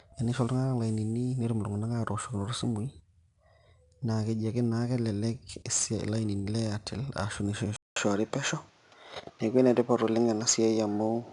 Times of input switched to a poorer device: 7.76-11.33

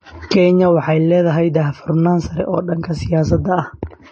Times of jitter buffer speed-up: none

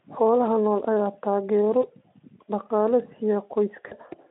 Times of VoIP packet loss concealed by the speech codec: 1.81-1.86, 3.87-3.97

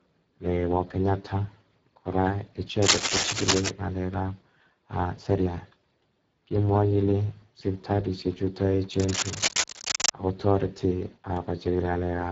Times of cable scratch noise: 2.82-3.71, 8.93-10.09

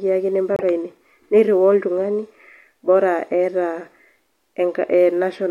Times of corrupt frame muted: 0.55-0.63

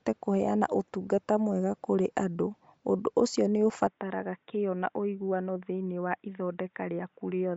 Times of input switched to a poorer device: 3.87-7.56

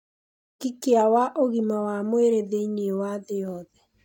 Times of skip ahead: none

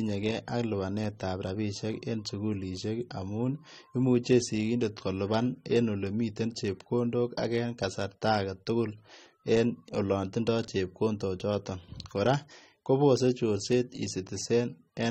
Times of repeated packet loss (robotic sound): none

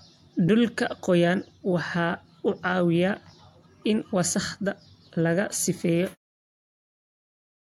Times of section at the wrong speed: none

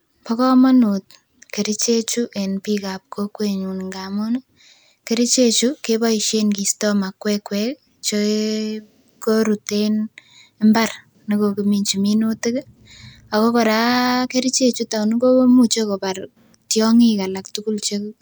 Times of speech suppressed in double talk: none

